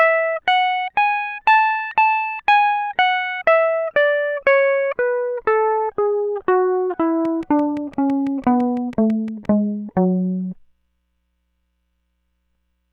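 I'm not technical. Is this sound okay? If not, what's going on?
No. From 7.25 s to 9.46 s a train of clicks runs over the music: about fifteen sharp ticks, evenly spaced at close to six per second, each roughly as loud as the music itself. They all have much the same shape, so they come from one repeating source rather than from the music. The likely cause is electrical interference from nearby equipment or a faulty connection or power supply, injecting a short pulse at a steady rate.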